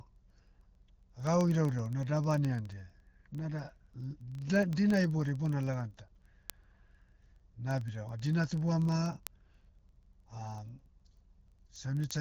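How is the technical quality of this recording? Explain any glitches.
The recording has a persistent clocking fault. The speech also passes through an AMR wideband (HD Voice) codec, with nothing above about 6.9 kHz and light coding damage, which fits 12.65 kbit/s.

Word clock ticks run from 0.13 s to the end, about every 30 ms. An unlocked receiver clock, roughly 700 ppm off, drops or repeats one sample per slip, producing sharp, uneven ticks.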